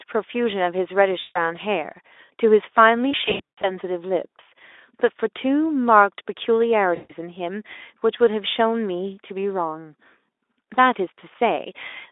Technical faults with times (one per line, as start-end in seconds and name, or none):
1.19-1.38 VoIP packet loss concealed by the speech codec
3.11-3.71 VoIP packet loss concealed by the speech codec
6.95-7.13 VoIP packet loss concealed by the speech codec